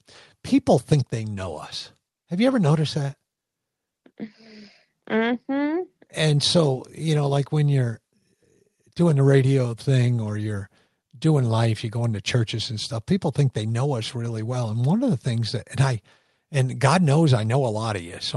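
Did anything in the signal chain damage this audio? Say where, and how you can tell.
No, nothing in this speech clip stood out on listening as damage introduced anywhere along the chain.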